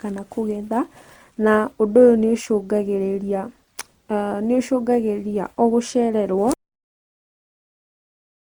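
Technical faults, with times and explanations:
Throughout: generation loss. The speech sounds swirly, hollow and smeared, with blurred attacks, likely from around four successive Opus passes at 64 kbit/s, each requantising on a shifted frame grid.
6.54 s: cut-off end. The speech stops mid-sound and drops straight to digital silence with no decay, because the final buffers were never written or played out.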